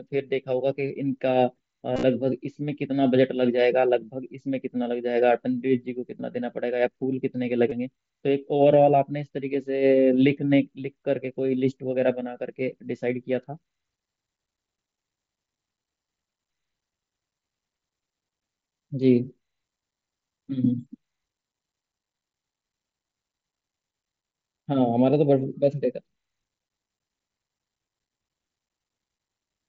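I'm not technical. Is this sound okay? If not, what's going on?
No, there are two small glitches from concealed Bluetooth headset packet loss. Bits of audio from the headset never reached the phone, so the phone filled each gap by repeating a bit of the sound just before it. Around 1.94 to 2.03 s you'll hear a brief buzzy flutter, and at 7.70 s a tiny blip. The headset link itself runs on the mSBC codec, which carries speech up to 8 kHz.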